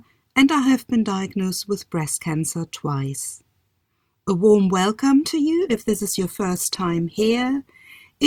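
Just after "warm welcome to", at 5.6 s, the adaptive stream drops to a lower bitrate until the end: the quality suddenly drops as codec artefacts rise, with no gap.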